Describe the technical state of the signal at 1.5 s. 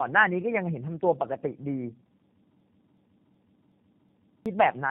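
Tandem speech coding runs through the whole clip, including 1.5 s: AMR-NB speech passes through G.711 and is re-coded by G.729A, compounding loss into rough, muffled, warbly speech with nothing above 3.6 kHz.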